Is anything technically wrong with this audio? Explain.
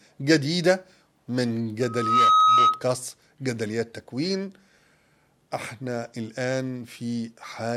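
Yes. From 1.81 to 2.85 s there is a loudspeaker feedback squeal: a microphone re-amplifies its own loudspeaker until a 1.3 kHz tone runs away. It swells in under half a second to roughly 10 dB above the sound. A spectrogram shows a bright horizontal line at 1.3 kHz, and the waveform shows a swelling envelope.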